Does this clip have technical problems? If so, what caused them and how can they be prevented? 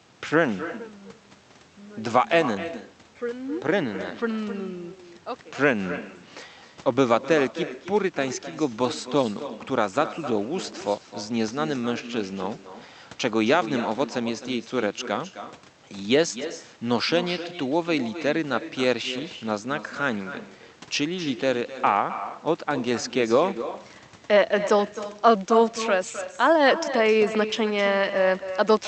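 Yes. There's echo with no canceller running the whole clip: the speech returns about 12 dB quieter, roughly a third of a second later, and thinner, because the far end's loudspeaker fed its microphone and nothing removed it. Enable acoustic echo cancellation at that end, or have them use a headset.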